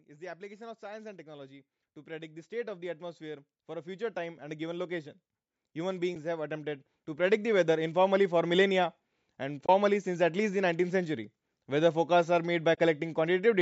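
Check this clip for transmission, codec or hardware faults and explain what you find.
Two faults stand out: the level creeps upward twice, and there are three brief dropouts.

Automatic gain rising runs from 0.05 to 5.18 s, lifting about 12 dB, then again from 5.73 to 8.58 s by about 7 dB. The gain control judged the input too quiet and slowly turned it up, so the speech and the background noise swell together rather than the speech alone getting louder.

AAC frame loss with muting shows up at 6.15 s, which is very short, and at 9.66 to 9.69 s and 12.75 to 12.78 s, about 30 ms each, which fits roughly three 10 ms frames. The decoder zeroed the missing frames, and the overlapping windows fade the sound out and back in, leaving a brief dip and soft-edged holes.

For context, nothing is heard above 8 kHz, as expected from call microphone processing, and there's a faint graininess, likely from low-delay AAC compression at a fairly generous rate.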